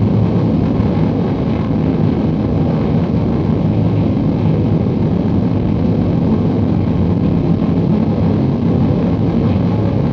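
No technical faults can be heard anywhere in this recording of sounds, and the signal stays continuous and intact throughout.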